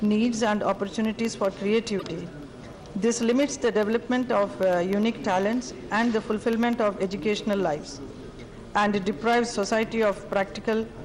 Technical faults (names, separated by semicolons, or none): periodic USB or driver dropouts; broken MP3 bit reservoir